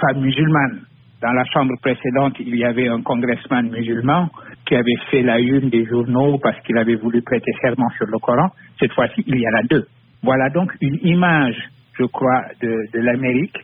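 Pre-emphasis left on from 10.91 s to 13.64 s: the treble lift applied before storage was never undone on playback, so highs sit about 8 dB above 1 kHz at 10 kHz, which fits the CD 50/15 µs curve, leaving the audio thin, bright and sibilant.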